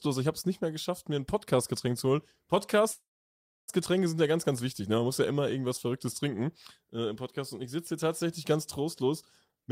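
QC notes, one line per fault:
2.91–3.70 s, call audio freeze: the speech stops and the last sound is carried on as a tail that fades, then drops to silence for about 640 ms of the 767 ms hold, before the talk picks up at "sind ja ganz ganz" exactly where it left off. Nothing is skipped; the gap is inserted, which separates this from a dropout that cuts material away. The likely cause is packets held up in transit, leaving the jitter buffer empty.
9.48–9.71 s, jitter buffer speed-up: right after "hier tatsächlich ganz trostlos" the speech rushes at roughly twice its normal rate (202%) while the pitch holds steady, so it sounds hurried rather than chipmunk-like. Around 200 ms of audio is taken out as a rapid series of short pitch-period slices, which is how the receiver trims an overfull buffer to bring the delay back down. The unchanged pitch distinguishes it from a resampling or playback-rate error.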